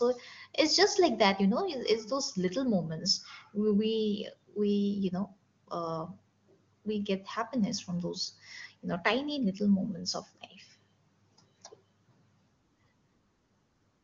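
Speech over an AMR wideband (HD Voice) link at 23.85 kbit/s, content stopping near 7.3 kHz as that codec's band limit dictates, with no technical faults found.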